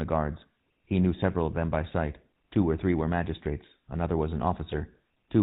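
Throughout the recording, the speech has passed through the GSM full-rate codec, which rebuilds the voice from a vocal-tract filter excited by a thinned-out pulse train instead of sending the waveform itself. Its buzzy, gravelly texture is plainly audible, consistent with the old 13 kbps full-rate scheme. Everything above 4 kHz is gone, so sibilants lose their hiss and the voice sounds boxed in and roughened across the whole clip.

From 4.72 to 4.77 s, just after "magistrates another was an", GSM bit errors strike. Corrupted bits from what sounds like a weak radio link reached the decoder, scrambling the filter, pitch or gain parameters it relies on. The damage spans about 50 ms, which fits two codec frames going bad. The decoder then produces a brief gargling squawk.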